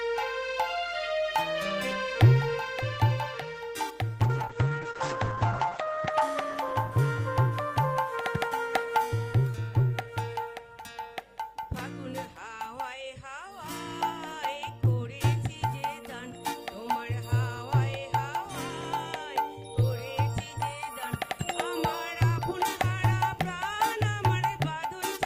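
A call bitrate drop hits from 4.25 to 7.63 s: the audio turns rough and muffled as the top end collapses from about 20 kHz to 8 kHz, which fits a fall from around 32 to 9 kbps. Unlike packet loss, nothing drops out.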